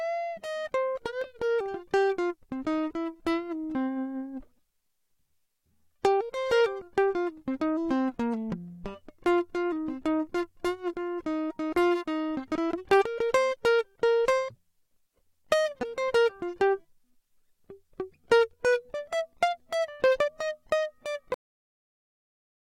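At 1.22, 6.80, 12.54 and 20.27 s the music is broken by brief glitches, each under 20 ms, caused by damaged data in a compressed stream. Corrupted bytes leave the decoder unable to read those frames, so it loses sync and hunts for the next valid frame header.

At 21.34 s the music ends in a cut-off end. The final buffers were never written or played, so the sound stops mid-note and falls straight to digital silence. A natural ending or a fade lets the sound decay first; here the level drops instantly, with nothing after the cut.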